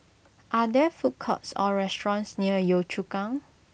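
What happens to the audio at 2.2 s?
Nothing goes wrong at 2.2 s: the speech continues intact through that moment, with no dropout, click, distortion or other fault.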